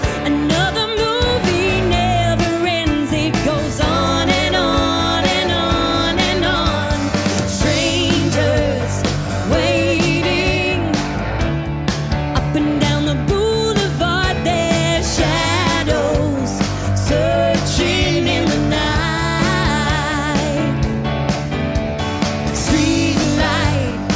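Nothing stood out on listening to this recording.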